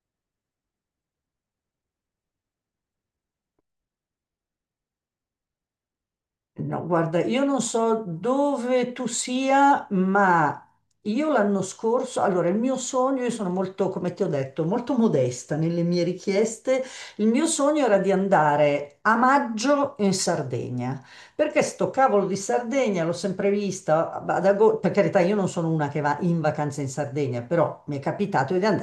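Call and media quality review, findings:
Nothing to flag on this speech recording; no issues turned up anywhere in it, so there's nothing to ticket.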